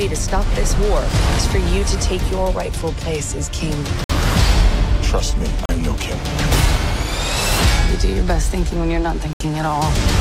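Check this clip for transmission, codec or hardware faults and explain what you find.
Three brief dropouts show up, at 4.04 to 4.10 s, 5.66 to 5.69 s and 9.33 to 9.40 s. Each is a Bluetooth stall. The sound cuts to silence for 55 ms, 36 ms and 73 ms, then resumes. The likely cause is radio interference delaying packets. The headphones' buffer empties, so playback halts until the resent data arrives. The gaps are short and abrupt, heard as small hiccups in the sound.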